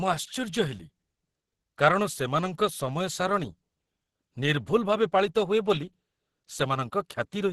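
Throughout, the speech sounds muffled, hoarse and grainy with nothing above 12 kHz, likely Opus compression in hybrid mode at a low bitrate around 12 kbps.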